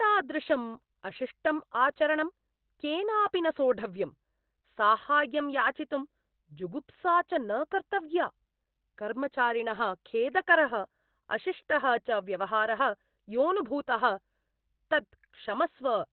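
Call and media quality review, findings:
Speech muffled and hoarse throughout, nothing above 4.2 kHz; likely Opus compression in speech (SILK) mode, narrowband band-limiting, heavy codec damage consistent with roughly 12 kbps.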